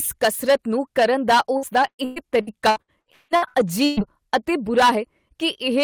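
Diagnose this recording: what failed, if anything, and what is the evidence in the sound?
Hard clipping runs through the whole speech clip: the input was driven about 11 dB past the converter's ceiling, so about 4% of the samples are squared off into harsh crackle.

There's repeated packet loss (robotic sound) on the network side from 1.57 to 4.00 s, right after "ਕਸਰਤ ਨੂੰ ਕਰਨ ਦਾ". Gaps up to 185 ms are patched with stretched sound, so it turns choppy with pieces missing.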